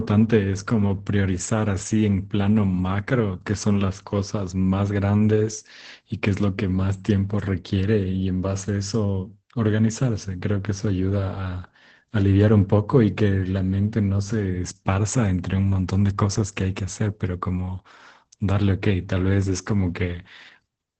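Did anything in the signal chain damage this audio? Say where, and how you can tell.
Yes, at the codec stage: the speech has gone through Opus voice compression in its SILK linear-prediction mode, throughout the clip. Nothing is present above about 8.4 kHz, so the encoder cut to wideband. The excitation is coded coarsely, leaving the voice muffled, hoarse and faintly robotic from start to finish. That degree of damage fits a low bitrate of around 12 kbps, where SILK cannot spend enough bits to keep the fine detail.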